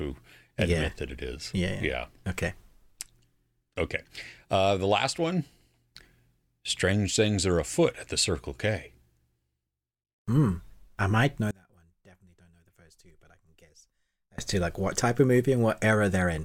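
After "I might know", from 11.51 to 14.38 s, the speech collapses by about 28 dB to a faint residue before returning at "to like what type". The likely cause is one channel inverted: with one side's polarity reversed, the centred voice and its low end cancel when summed to mono, leaving only the small difference between channels. Unlike a dropout or mute, a faint ghost of the voice persists rather than true silence.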